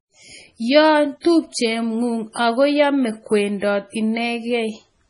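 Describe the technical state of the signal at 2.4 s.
Just before 2.4 s, from 2.33 to 2.36 s, a short hiss rises for about 28 ms ahead of a sharp onset, and the attack itself lands soft and smeared rather than crisp. This is pre-echo. The transform codec spreads its quantisation noise across the whole block, so noise scaled for the loud attack also fills the quiet stretch before it, where nothing masks it.

Around that moment the speech also sounds watery and swirly, with chirpy, metallic s sounds and nothing at all above 10.6 kHz. The damage is heavy, and it is likely caused by MP3 compression at a very low bitrate, consistent with about 24 kbps. Short of bits, the encoder cuts the treble at a fixed point and drops weak frequency lines that flicker on and off from frame to frame, producing that unstable, bubbling texture.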